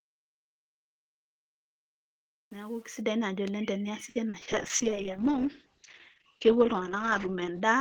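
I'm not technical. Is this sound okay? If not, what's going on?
No, there are three problems.

From the start to 3.01 s the speech fades in, but the quiet part of that fade, almost all of it up to 2.95 s, sounds gritty. This is truncation distortion on a fade. The volume change was done digitally with too few steps of loudness, about 8 bits' worth, and no smoothing noise was added. Near silence the waveform collapses into a few coarse blocks.

Right after "oleng teniasi", from 4.09 to 4.48 s, the speech turns choppy and robotic. It has four short holes, the longest about 60 ms, and roughly a third of that stretch is filled in artificially. This is repeated packet loss. Pieces of a call's audio went missing one after another, and each gap was patched by stretching the last sound, which gives that choppy quality.

From 4.49 s to the end, the speech sounds duller and rougher, as if heard through a wall, with the crisp, airy sounds gone. 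This is a call bitrate drop. The connection signalled that less data could get through, so the audio was squeezed much harder. The coarser encoding and the loss of the highest sounds make the speech muffled for the rest of the clip.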